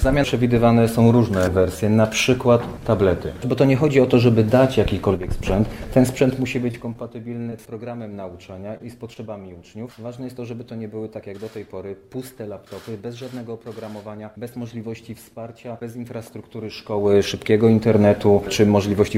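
From 6.18 to 7.12 s the level drops by about 15 dB as zipper noise. It moves in hard 2 dB steps, roughly ten a second, with no smoothing, so each jump leaves a small click and you hear a ticking that rides on the sound as it falls.

Inside that fade, at 6.71 to 6.75 s, there's short concealed packet loss. About 20 ms never arrived, and the receiver papered over it by extending the last bit of sound, then blended back in. It comes across as a quick smear.

At 6.93 to 6.97 s there's a short stall from a late packet. Nothing is actually lost, but the jitter buffer ran dry, so the receiver held the sound for about 18 ms until the packet turned up. You get a brief stretch with a slight buzz or dip. The same thing happens at 7.43 to 7.48 s, this time a 26 ms hold.

The concealed losses carry on at 7.50 to 7.53 s, 8.77 to 8.81 s and 9.13 to 9.17 s. Each is a roughly 20 ms gap filled the same way and heard as a brief wobble.

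From 16.71 to 17.15 s the zipper noise is back, this time with the level coming up about 15 dB in 2 dB steps at roughly 30 a second. That gives a faster zipping than the first one.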